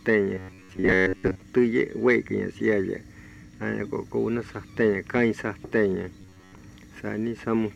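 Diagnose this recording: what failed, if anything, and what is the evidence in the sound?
Robotic sound from repeated short buffers, 0.34 to 1.42 s and 6.22 to 6.58 s. A rigid 93.8 Hz buzz is imposed on the sound, matching a looped chunk of about 10.7 ms. Likely a driver or buffer underrun, with most real audio skipped.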